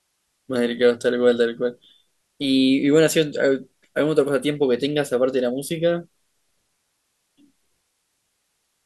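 Speech recording with no audible technical faults.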